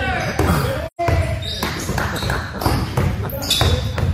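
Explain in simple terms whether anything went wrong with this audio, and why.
From 0.86 to 1.00 s, the sound softly fades into a short gap. That is AAC frame loss with muting: missing data was played as silence.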